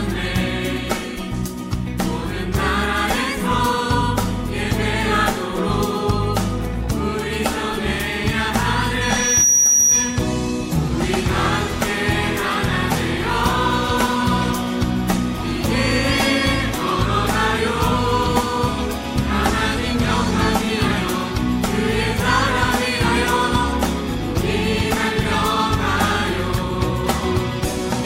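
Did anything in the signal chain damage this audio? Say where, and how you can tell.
Yes. A loudspeaker feedback squeal appears from 9.01 to 10.27 s, an acoustic loop between playback and microphone. A single 5.8 kHz tone swells in under half a second, peaking about 5 dB above the audio. The loop's gain exceeded one at that frequency.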